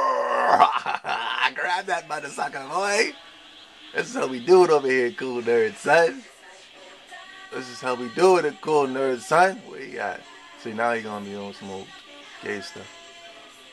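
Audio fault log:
No faults detected in this audio.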